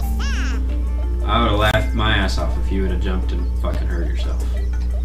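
At 1.71 to 1.74 s and again at 3.74 s, a gap at a join of encoded pieces cuts the sound, about 27 ms then 11 ms. Separately encoded two-second pieces kept their leading delay and end padding, leaving brief silences: thin vertical blank stripes on a spectrogram, flat waveform dropouts with smeared edges.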